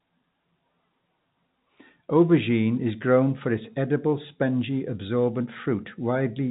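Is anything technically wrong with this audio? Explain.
No, nothing technically wrong is audible here.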